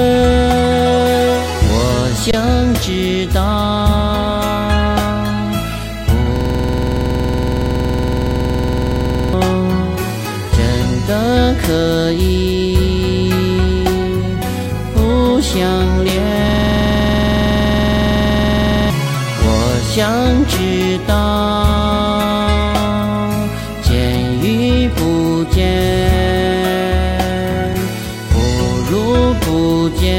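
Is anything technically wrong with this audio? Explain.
Yes, there are two kinds of fault.

Underrun with held sample, at 2.31 to 2.33 s and again at 27.74 s: the output buffer ran dry and the converter held its last value. The first gap lasts about 23 ms, which fits a 1024-sample buffer, and the second only about 3 ms. The sound halts briefly without a click. Playback resumes where it left off, so nothing is lost and the restart is soft. On a waveform, each gap is a flat line. On a spectrogram, it is a thin blank column.

System hang loop, at 6.36 to 9.33 s and at 16.49 to 18.90 s: the system froze while the hardware kept replaying the same ring buffer. A 46.44 ms fragment, which fits a 2048-sample buffer, repeats 64 and then 52 times at 21.5 Hz. The result is a rapid mechanical stutter bordering on a rough buzz. About three seconds and then two seconds of audio are lost. The waveform shows identical repeating blocks, and the spectrogram shows vertical stripes spaced evenly at that rate.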